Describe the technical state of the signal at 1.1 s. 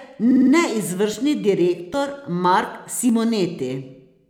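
At 1.14 s the speech jumps ahead, skipping about 20 ms with no gap of silence. That's a dropped buffer (overrun): likely the software didn't grab its samples in time, the hardware overwrote them, and the two sides got spliced together.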